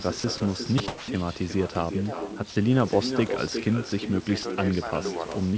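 It's a speech recording carrying echo with no canceller the whole way through. Every phrase is shadowed by a fainter, thinner copy arriving somewhere around 400 ms later, about 10 dB below the direct speech. That's what you get when the far end plays the call on a loudspeaker, its mic picks it back up, and nothing subtracts it before it returns over the round trip. On top of that, there are short spots where the speech vanishes into steady low noise and then comes back: 0.20 to 0.24 s, 0.38 to 0.40 s, 0.78 to 0.80 s, a longer one from 0.88 to 1.08 s, then 2.50 to 2.56 s and 3.90 to 3.92 s. That pattern likely comes from sound dropped by the voice detector. The sender's detector took quiet stretches or word endings for background and stopped transmitting, so the receiver filled the gaps with comfort noise until speech triggered it again.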